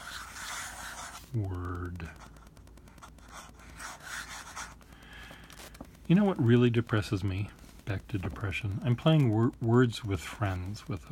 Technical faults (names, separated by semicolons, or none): Wi-Fi interference